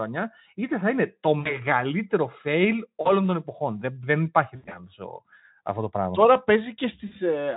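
At 1.39 to 1.58 s, 3.01 to 3.14 s, 4.55 to 4.80 s and 7.07 to 7.13 s, VoIP packet loss is concealed by the speech codec. Lost packets are filled by extrapolation, so the speech smears into a fading buzz or coloured noise, longest around 4.6 s.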